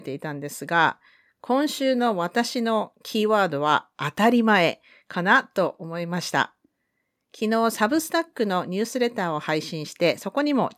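No technical faults can be heard anywhere in this speech recording. The audio holds steady throughout, with no disruption at any moment.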